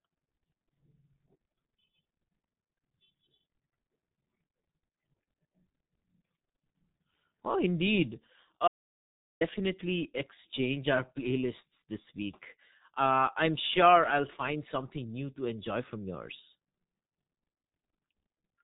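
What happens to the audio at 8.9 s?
The audio input was likely lost from 8.68 to 9.41 s, and the recorder filled the gap with silence. This audio dropout to silence cuts the speech off mid-flow, leaving about 0.73 s of total silence, with no room tone at all, before the sound returns.

Across this moment and the whole clip, the speech also carries the G.723.1 codec at 6.3 kbit/s. Its 30 ms frames and slowly updated voice model damage the sound heavily, and nothing passes above 3.8 kHz. The speech sounds muffled and hoarse, with blurred consonants.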